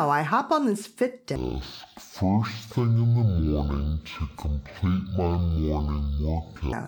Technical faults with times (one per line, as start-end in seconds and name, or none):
1.36-6.72 stereo read as mono